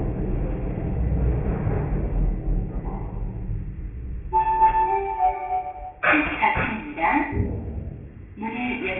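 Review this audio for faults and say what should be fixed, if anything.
There's aliasing throughout: content above 3 kHz folds back into gritty, unrelated tones sitting only about 10 dB under the sound, which points to an unfiltered drop to 6 kHz. Next time, low-pass below the new Nyquist before resampling.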